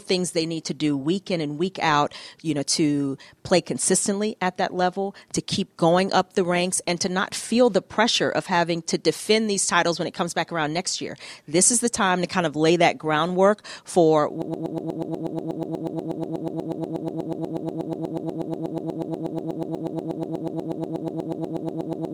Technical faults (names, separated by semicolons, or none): broken-record loop